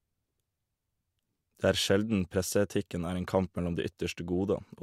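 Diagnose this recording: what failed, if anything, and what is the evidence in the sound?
A resampler restarted on every block runs throughout the speech, at the sample-format conversion stage. Ticks at 25 Hz, one every 40 ms, follow the signal and stop in silence. This fits a 48 kHz to 44.1 kHz conversion run on each block separately, leaving small errors at each block edge.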